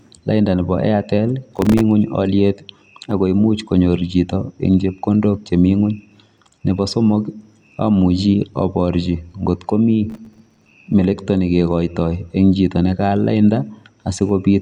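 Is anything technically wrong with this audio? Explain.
Yes. Processor overload crackle at 1.56–1.81 s and 10.10–10.73 s: the processor kept missing its deadline for buffers of a few milliseconds, leaving dozens of brief silent gaps heard as gritty crackle over the speech.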